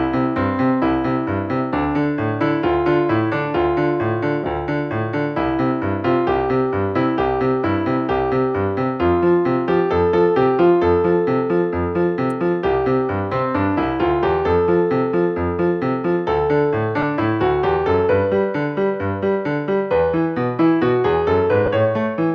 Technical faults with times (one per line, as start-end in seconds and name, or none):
4.44-4.46 lost LE Audio frames
12.30 electrical switching spike
17.02 lost LE Audio frames
21.66-21.68 lost LE Audio frames